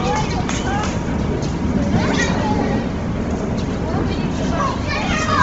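Throughout, nothing sounds above 7.8 kHz, and the top turns grainy and breathy. It is noise-filled rather than cleanly cut like a plain low-pass, likely from heavy Bluetooth LC3 compression.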